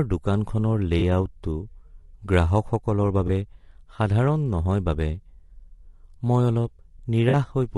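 Low-delay AAC compression runs through the whole clip. The speech sounds rough and grainy, with noise filling the gaps between harmonics and a thin, synthetic-sounding top band. That points to the short frames of AAC-ELD, likely at a bitrate around 32 kbps, resolving pitch poorly.

AAC frame loss with concealment appears at 0.99–1.02 s, 3.27–3.30 s and 7.29–7.35 s. The decoder patches missing data from the last good spectrum. The first two gaps of about 20 ms each fit a single lost frame, and the last, about 40 ms, fits two. Each leaves a brief smeared, noisy or phasey patch.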